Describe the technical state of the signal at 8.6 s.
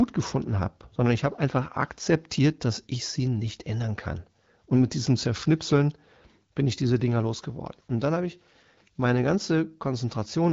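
At 8.6 s the speech is intact, carried cleanly through the AMR wideband (HD Voice) path at 12.65 kbit/s with no fault at that point.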